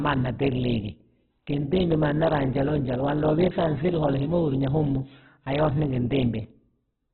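Opus compression runs through the whole speech clip, likely from a very low rate near 8 kbps in its music mode. Starved bands are filled with folded or noise content, leaving the speech rough and grainy, with nothing above 4.4 kHz.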